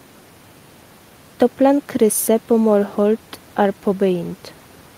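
Nothing goes wrong in this speech recording, and the only extra sound is the room's own background noise, sitting about 30 dB below the talking.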